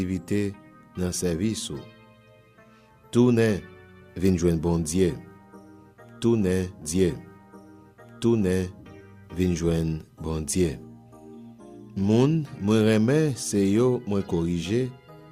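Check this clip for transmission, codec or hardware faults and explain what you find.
One transmission fault is present: a stream segment repeated, running from 6.81 s to 8.81 s. The player fetched or queued the same chunk of the stream twice, so the playback position jumps back and a 2-second stretch of audio plays a second time, adding 2 s to the clip. At the jump back there is a small blip where the new copy of the segment joins the end of the previous one, and then the same material is heard again.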